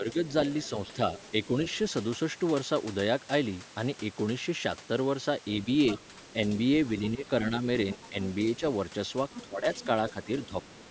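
Speech suppressed in double talk affects this speech recording at 0.0 to 1.48 s, 7.13 to 8.62 s and 9.46 s to the end. The talker's level dips by about 5 dB in the first two spans and by about 20 dB in the last, likely because the echo canceller turned everything down while both sides spoke. The other side's voice leaking through is audible at 0.28 to 1.78 s, 5.89 to 6.33 s, 7.92 to 8.59 s and 9.32 to 10.66 s. This is a second voice, about 15 to 25 dB below the talker, likely picked up from the loudspeaker and left in by the echo cancellation. It sits within the call band, which stops around 8 kHz.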